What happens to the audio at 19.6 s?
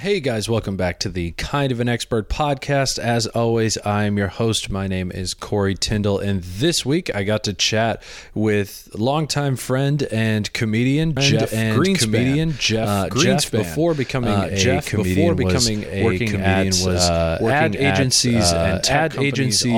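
At 19.6 s a doubled audio track is running: from 11.17 s to the end, a second full-level copy trails by about one and a half seconds, likely from a slower capture path. On a waveform or spectrogram, every pattern reappears whole, shifted in time.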